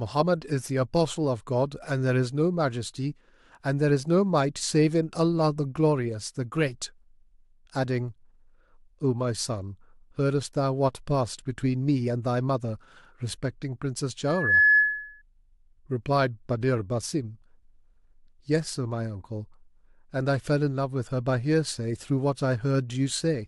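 From 14.27 to 15.22 s a single 1.7 kHz tone swells over a fraction of a second into a squeal well above the speech: loudspeaker feedback squeal, where microphone-to-speaker loop gain exceeded one.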